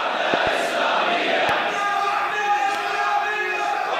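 Loud pops land between 0.34 and 0.49 s (a double pop), 1.49 to 1.51 s and 2.75 to 2.77 s. Each is a sharp thump standing well above the sound, which keeps running underneath rather than dropping out. The cause is likely a voltage spike from a plug, switch or static.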